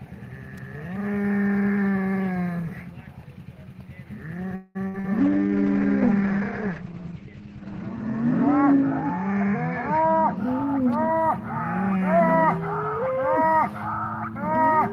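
At 0.58 s a sharp snap or tight cluster of clicks sits on top of the sound, likely an electrical switching spike from a nearby switch or motor arcing into the audio line.

From 4.55 to 4.87 s the sound stretches into a fading held buzz or hiss, a call audio freeze likely where delayed packets emptied the jitter buffer. Nothing is lost, but about 0.2 s of delay is added.

Right after, from 4.88 to 4.96 s, a burst of packet loss drops 60 ms. The receiver extends and fades the last sound, then resumes further along.

At 5.00 to 5.06 s a short concealed packet loss replaces 40 ms with synthesized continuation, heard as a brief smear before the real audio blends back.

From 5.20 to 10.43 s a call bitrate drop takes the encoder from 32 to 10 kbps. Bandwidth falls from 20 kHz to 8 kHz, leaving the sound muffled and rough, worst for about 2.6 s.

Overlapping this, from 9.54 to 11.23 s, a jitter buffer speed-up removes pitch-period slices to shed excess delay. 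Playback runs at 108% with unchanged pitch, trimming roughly 0.15 s and sounding hurried.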